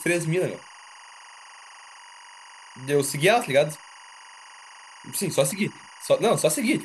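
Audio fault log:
throughout, timecode bleed: a steady chirping warble sits behind the speech, roughly 25 dB below it. Linear timecode from a neighbouring track or cable is leaking into the audio, its square wave flipping between pitches near 1 kHz and 2 kHz, with a repeating pattern that fits 23.976 fps code. A spectrogram would show unbroken bands at about 1 kHz and 2 kHz plus their odd harmonics. The waveform would carry a low, constant square-edged ripple even between phrases.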